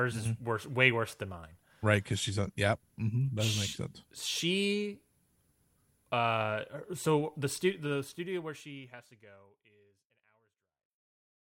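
No technical faults are audible in this speech.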